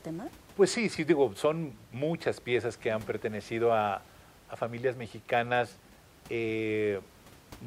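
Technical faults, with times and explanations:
Nothing in this speech recording stands out as a technical problem, and the only thing in the background is the ordinary noise of the room, sitting about 26 dB below the talking.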